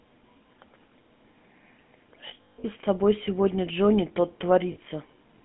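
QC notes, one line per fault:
throughout: GSM full-rate codec. The encoder reduces the signal to a vocal-tract filter excited by a sparse, regularly spaced pulse train, and the coarse excitation, which fits a 13 kbps full-rate stream, gives the speech a plainly audible buzzy, gravelly roughness. The line band runs from 150 Hz to 3.4 kHz, so the low body of the voice and everything above 3.4 kHz are gone, leaving a thin, boxy telephone sound.
2.28–2.65 s: lost GSM frames. Bad frames are concealed by reusing the last good frame's settings, so about 260 ms of the sound is replaced across a 360 ms stretch, which fits around 13 lost 20 ms frames. The longest gap, roughly 150 ms, is heard as a held, rough, metallic ring before normal speech returns.
4.72–4.77 s: lost GSM frames. A brief 50 ms span, about 40 ms of it concealed, which fits two lost frames. The repeated settings leave a short metallic smear in place of the real sound before the stream recovers.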